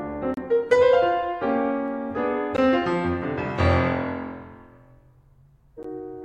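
At 0.34 to 0.37 s the music drops out for about 30 ms, then again for about 14 ms at 2.57 s and at 5.83 s. Each is a gap at a join of encoded pieces: separately encoded segments were butted together with the encoder's start-up delay and final-frame padding left in place. Each sounds like a brief hole, after which the music resumes exactly where it stopped. A waveform shows a flat strip with steep, slightly smeared edges, and a spectrogram shows a thin vertical blank band.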